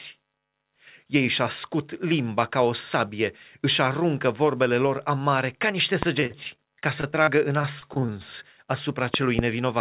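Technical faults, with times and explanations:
6.03–6.05 s, loud pop: a single sharp pop stands about 20 dB above the speech for roughly 20 ms while the speech carries straight on underneath. That distinguishes it from a dropout, where sound goes missing. The likely cause is a sudden voltage step, such as a plug, switch or static discharge, which the downstream circuitry rounds into a short thump.
6.2–8.1 s, repeated packet loss (robotic sound): across this stretch the speech turns choppy, with about a sixth of it patched. The pattern fits around sixteen separate losses, the longest about 38 ms. Each hole is filled by stretching the preceding sound, then the next loss arrives soon after, producing the buzzy, robotic texture. A single concealed gap would sound like one brief smear. The steady dullness above 4 kHz comes from the narrowband G.711 call path and is separate from this fault.
9.14–9.41 s, loud pop: two pops in quick succession, each again about 20 dB over the speech, with the speech continuing beneath them. 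They point to a likely electrical disturbance such as a plug, switch or static discharge, rather than anything in the digital transmission.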